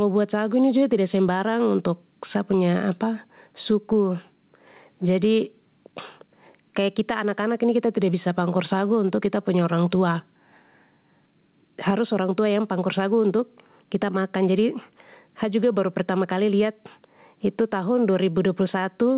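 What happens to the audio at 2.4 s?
Gain pumping, present throughout: at 2.4 s the gain swings roughly 10 dB, pulling loud and soft parts closer in level so the speech sounds squashed, likely from excessive gain driving a fast limiter.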